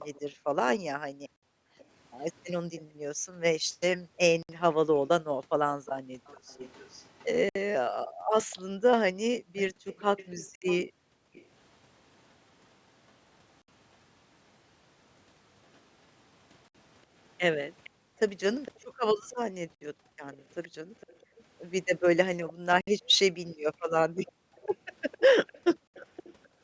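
A speech recording carrying three separate faults. A faint second copy of the voice trails the speech throughout, about 0.46 s late. It sits roughly 20 dB below the direct voice. This is an echo leak. The likely cause is a loudspeaker on the far end whose echo canceller missed part of what its microphone caught. That leftover was sent back down the line. The delayed copy sounds like a ghost behind each phrase.

The same canceller also causes background gating by the echo canceller. Between 0.34 and 11.34 s, the room sound keeps dipping away. It happens again between 17.90 and 26.62 s. At its deepest, the drop is about 40 dB. That is close to silence. The dips add up to roughly three seconds in the first stretch and about two in the second. Each time, the canceller pulled the microphone down hard while it judged the far side to be talking, then let go.

There is also a gap between chunks. 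Short holes appear every 3 s, from 1.36 s through 25.87 s. Each one lasts 64 ms. The audio was handled in 3 s blocks. Silence was left at each join, possibly from codec padding or late playback of each block. Nothing is missing from the speech. It is just cut at every join. The call microphone processing, which keeps everything below 8 kHz, is working normally; its high-pass filter takes out only the lowest bass.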